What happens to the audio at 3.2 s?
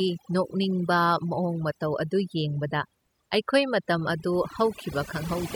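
At 3.2 s the speech is caught in overdone noise removal, which runs through the whole clip rather than starting there. A noise reducer pushed too hard is muting individual frequency bands whenever they sit close to its noise estimate, taking the softer parts of the voice with them. The background drops and breaks up into twinkling specks. Unlike a noise gate, nothing switches wholly on and off; the damage is scattered across frequencies.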